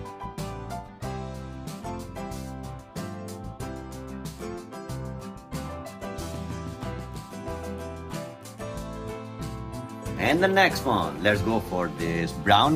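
No faults detected anywhere in the recording.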